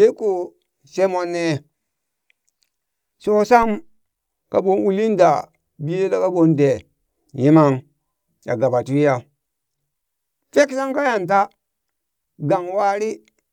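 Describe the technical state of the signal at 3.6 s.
At 3.63 s there's a DC step: the waveform's zero line suddenly jumps by about -21 dBFS, then drifts back as a 2 Hz high-pass bleeds the offset away. You hear it as a single low thump or click, while the speech itself carries on untouched.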